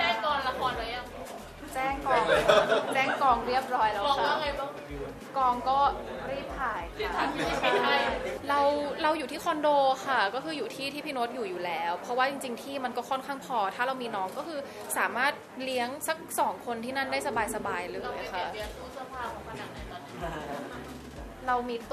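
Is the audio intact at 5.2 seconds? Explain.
Yes, the audio at 5.2 seconds is intact, with no dropout, click, distortion or other fault at that point.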